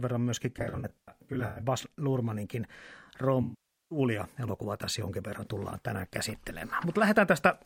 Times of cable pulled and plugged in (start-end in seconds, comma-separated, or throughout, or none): none